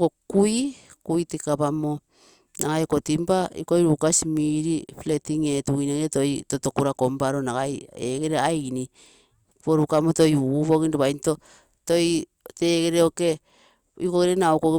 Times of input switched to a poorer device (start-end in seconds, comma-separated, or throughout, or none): none